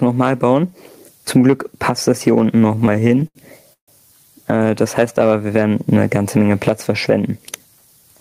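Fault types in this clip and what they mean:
Gain pumping: The level of the whole clip keeps breathing, with a swing of around 15 dB, so loud and quiet passages sit close together and the sound is flattened. The likely cause is input gain set far too high for the microphone, with a fast limiter or compressor reacting to every peak.
Repeated stalls (stutter): Between 2.59 and 3.37 s the audio repeatedly halts and drags. The receiver ran out of buffered audio 11 times and bridged each hole by extending the last sound, about 197 ms of fill in total, with the longest hold near 77 ms. That is roughly a quarter of the span. Nothing is lost, but the flow keeps stopping and restarting.
Call audio freeze: From 3.73 to 3.90 s the sound stops briefly. The receiver carries the last sound forward as a short fading tail, and the final 100 ms are silent. About 146 ms is inserted this way, and the audio then resumes where it stopped, so nothing is missing. 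The likely cause is packets held up in transit, emptying the jitter buffer and adding 146 ms of delay.
Jitter buffer speed-up: Between 7.18 and 7.60 s the audio runs hurried at unchanged pitch, playing at 113% speed. The receiver had more audio queued than it wanted and trimmed out many tiny pitch-period-sized slices in quick succession, around 70 ms in all, to bring the delay back down. The effect is a brief rushed stretch rather than any change in tone.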